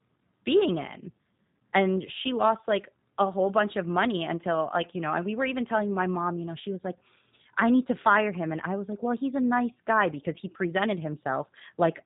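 Throughout the speech there's G.729 codec damage: nothing above about 3.8 kHz, and a rough, synthetic texture that fits an 8 kbit/s model-based rebuild.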